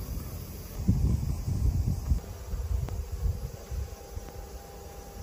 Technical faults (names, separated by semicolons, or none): loud pop